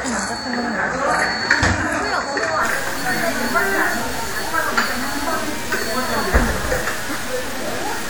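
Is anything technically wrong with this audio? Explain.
Yes, three faults can be heard.

From start to finish a fixed, high-pitched whine sits at 8 kHz, roughly 35 dB below the sound itself. This is USB whine. A USB bus draws current in 125-microsecond microframes, which repeat 8000 times a second. That current ripple gets into the audio through the shared power or ground, so its repetition rate becomes a steady tone at exactly that frequency.

Also present throughout is plainly audible codec damage. The sound rings and smears, with a washy hiss that rises and falls with the signal. This is most likely WMA compression at a low rate, consistent with around 48 kbps. A transform codec like this spreads its quantisation noise across long blocks of tens of milliseconds and discards weaker spectral detail. That produces the smeared, breathing texture.

From 2.63 s to the end, a coarse error appears that follows the signal, sitting only about 10 dB below it. 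Depending on how dense the material is, it comes across as grainy distortion or as a near-steady hiss. This is low bit depth without dither. The audio points to roughly 5 bits, with values simply truncated to the step below and no dither added. Because of that, the rounding error stays tied to the signal rather than being spread out as neutral noise.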